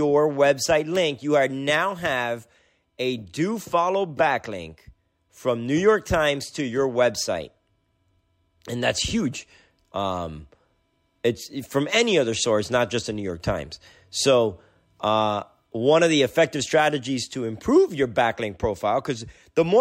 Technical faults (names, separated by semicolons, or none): none